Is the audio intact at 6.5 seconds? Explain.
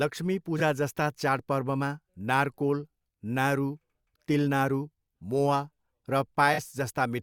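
No. AAC frame loss with concealment occurs from 6.53 to 6.59 s, a gap of about 43 ms that fits two lost frames. The decoder bridges it by reusing the last good spectrum with scrambled signs or interpolated energy, so the speech briefly turns smeared and noisy instead of dropping out.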